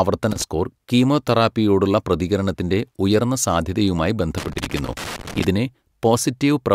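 An irregular burst of crackle and scratching cuts into the speech at 0.31 to 0.42 s, just before "സ്കോർ കീമോതെറാപ്പിയോടുള്ള പ്രതികരണത്തിന്റെ ഉയർന്ന", and returns for about a second at 4.38 to 5.45 s, after "കീമോതെറാപ്പിയോടുള്ള പ്രതികരണത്തിന്റെ ഉയർന്ന സാധ്യതയുമായി". This is loose connector crackle: a worn or dirty contact rapidly making and breaking, chopping the signal.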